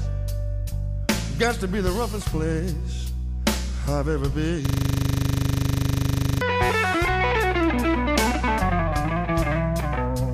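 A system hang loop runs from 4.66 s to 6.41 s: a 40 ms slice of audio repeats exactly, about 44 times, giving a steady buzz at 25 Hz. The host or driver stalled while the hardware kept replaying its ring buffer, which fits a 40 ms buffer.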